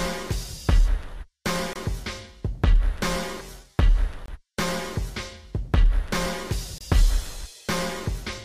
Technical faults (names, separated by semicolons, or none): gap between chunks